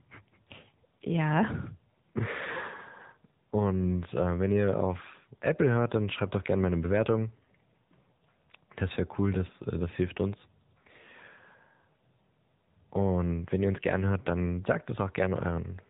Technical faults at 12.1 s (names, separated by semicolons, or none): AMR narrowband mobile codec